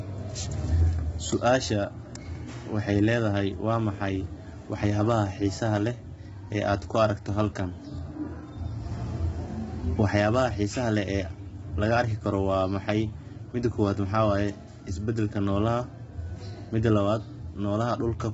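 A speech clip with heavy codec damage from start to finish. The voice sounds rough and grainy. Noise fills the gaps between the pitch harmonics, which are poorly defined. Nothing is present above 7.7 kHz. The likely cause is low-delay AAC compression, AAC-ELD as used in video calls. Its short frames cannot resolve harmonics finely, and they leave little room to save bits for hard passages. The damage fits a bitrate around 16 kbps, too few to keep the voice clean.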